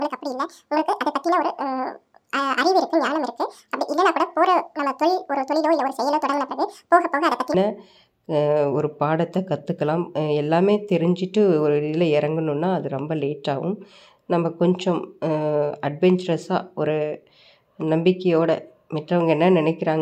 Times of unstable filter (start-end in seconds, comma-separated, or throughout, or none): none